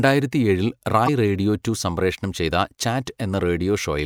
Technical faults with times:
1.05-1.09 damaged data in a compressed stream

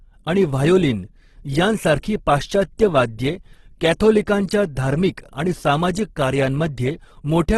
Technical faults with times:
0.00-7.57 Opus compression

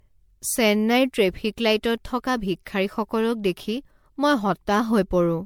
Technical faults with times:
0.00-5.45 generation loss

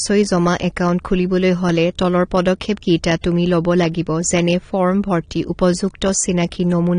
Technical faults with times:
0.00-6.99 AAC compression
3.21-3.24 pre-echo

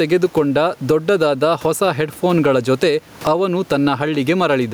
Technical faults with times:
0.00-4.73 gain pumping

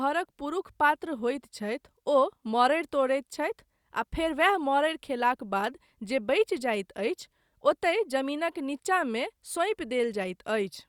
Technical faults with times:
none

